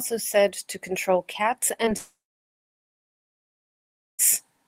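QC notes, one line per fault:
1.85 to 1.89 s, short concealed packet loss: About 20 ms of the speech is missing here. The receiver patched roughly 13 ms of it by extending the sound just before it, then blended back. This leaves a brief smear or wobble in the flow of speech.
1.97 to 4.21 s, long network dropout: The sound breaks off and about 2.22 s goes missing. A short fading continuation of the last sound is heard, then about 2.04 s of silence. The likely cause is that no audio reached the receiver for that stretch. Speech resumes near 4.21 s without the lost part.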